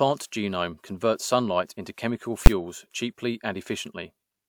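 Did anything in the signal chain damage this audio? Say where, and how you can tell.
Yes. At 2.46 s the speech is broken by a single loud bang, the signature of invalid numbers at full scale. A processing calculation produced invalid values, so a roughly 12 ms block, which fits a 512-sample buffer, was pinned to one extreme value. The waveform shows a flat slab far beyond the speech peaks, and the spectrogram a bright full-height vertical stripe.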